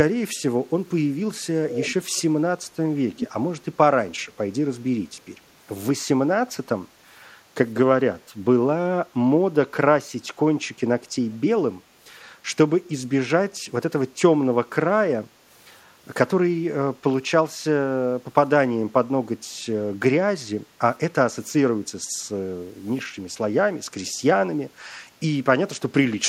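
A delayed, fainter copy of the speech trails the talker by about 162 ms at 1.7–2.22 s, 3.17–3.28 s and briefly at 9.73–9.77 s, loudest at 3.17 s and faintest, about 25 dB below the speech, at 9.73 s. This echo leak likely comes from a far-end echo canceller letting loudspeaker pickup through.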